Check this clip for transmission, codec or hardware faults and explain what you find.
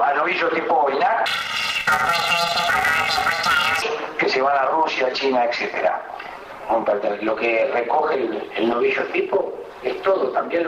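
One fault is present: planar audio read as interleaved, from 1.26 to 3.82 s. Each 128-sample block holds all of one channel and then all of the other, but it is read as alternating pairs, so every 2.9 ms block plays squeezed and twice, left then right. With blocks this short there is no clear octave jump, just a robotic buzz at about 345 Hz. A spectrogram shows a comb of harmonics spaced 345 Hz apart across that stretch, and the waveform shows a regular chop every 2.9 ms.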